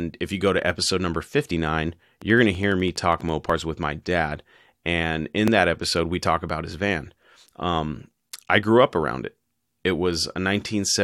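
A speech clip with two kinds of fault. Overlap between stream segments occurs at 1.51 s, just after "go to episode number", again at 3.50 s, and at 5.48 s, just before "that episode we talk". The three events are 2 s apart, matching a 2 s segment length. At each boundary the timestamps of neighbouring segments overlap, and the player trims a few milliseconds of audio that was never duplicated. Each event is heard as a tiny click or skip. On a waveform it shows as a sudden step where the cycles don't line up, and on a spectrogram as a thin full-height vertical line. A train of clicks runs from 2.22 s to 3.30 s, ending just before "with my dad". The clicks are regularly spaced at about 12 per second, roughly fifteen in all, and they peak at about the same level as the speech. The even spacing and similar shape of the pulses most likely come from electrical interference or a faulty connection or power supply. 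On a waveform these appear as evenly spaced sharp spikes riding on the signal, and on a spectrogram as a picket fence of narrow broadband stripes.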